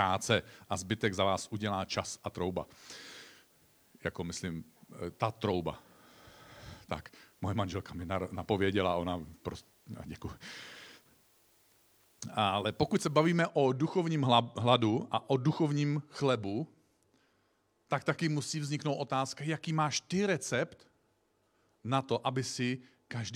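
Speech with low bit depth with dither from 0 to 13.3 s. Only about 10 bits are used, so dithered rounding leaves a steady, even hiss roughly 35 dB below the voice.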